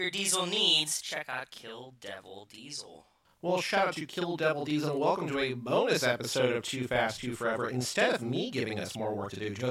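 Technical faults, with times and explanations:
Throughout, channel delay (doubling): one channel lags the other by 40 ms, so the mono sum carries an equal-level late copy heard as doubled speech. The waveform shows every onset repeated 40 ms later. The spectrogram shows doubled onsets and comb notches spaced 25 Hz apart.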